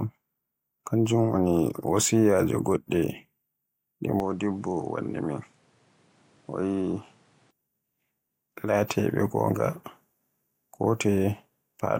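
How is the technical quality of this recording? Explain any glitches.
The recording has one fault, a mid-clip device change. From 4.2 to 7.51 s the speech loses everything above 11.4 kHz, drops a few dB, and carries a faint new noise floor. This is likely an input switched to a poorer device, and it cuts over cleanly with no gap before the fuller sound returns.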